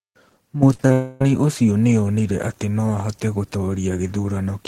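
Repeated packet loss (robotic sound) from 0.73 to 0.91 s: four short gaps, the longest 39 ms, are patched by repeating prior sound, leaving a choppy stutter. A long network dropout from 0.93 to 1.21 s is the likely cause of the next problem: about 280 ms never arrives and is replaced by a smeared continuation of the last sound, with no silence, before the audio returns at "ũcio nĩ onire atĩ".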